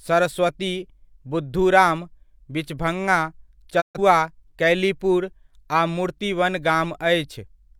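From 3.80 to 3.99 s a digital broadcast dropout mutes the speech: three lost frames, a 20 ms fade, clean silence, not concealment's smeared repetition.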